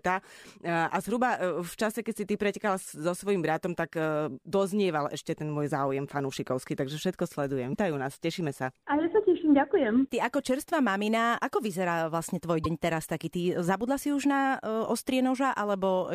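Likely a broken MP3 bit reservoir: after dropped frames, the next frame reads misplaced bytes, so the speech jumps with brief glitches at 7.72–7.76 s and 12.63–12.66 s.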